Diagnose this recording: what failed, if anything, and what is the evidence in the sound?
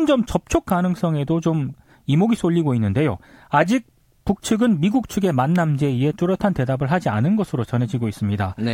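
The fault sits in the analogue wiring. Two sharp snaps land on top of the speech, at 0.70 s and 5.56 s. Each is only a few milliseconds long. The first is the louder, peaking around -10 dBFS. The second reaches around -15 dBFS. These are electrical switching spikes. They were likely caused by a nearby switch, motor or static discharge arcing briefly. The audio line picked up that burst of energy and added it as a click.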